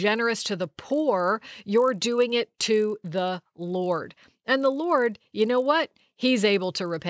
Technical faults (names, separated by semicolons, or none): resampler restarted on every block